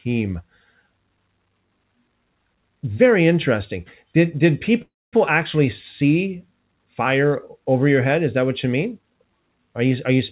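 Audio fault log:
4.82–5.15 s, call audio freeze: packets were likely held up in transit and the jitter buffer ran dry, so the receiver stretched the last sound into a brief fading buzz or hiss, then about 0.23 s of silence, before resuming intact at "actually see fire over", 0.31 s late.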